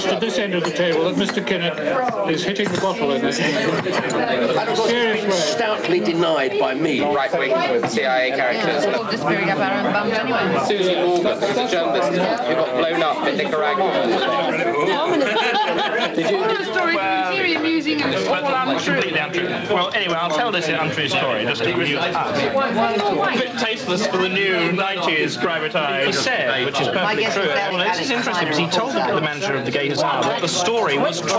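Gain pumping runs through the whole clip. The level never settles. The gain swings by roughly 5 dB, pulling down each time a loud sound arrives. Loud and soft passages sit unnaturally close together, so the sound feels squashed and breathing. The likely cause is gain set far too high for the microphone, with a fast limiter or compressor clamping down on each peak. The call microphone processing is audible too, with nothing above 8 kHz.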